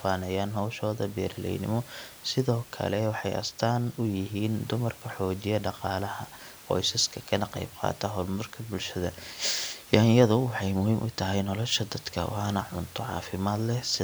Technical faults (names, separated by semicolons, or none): none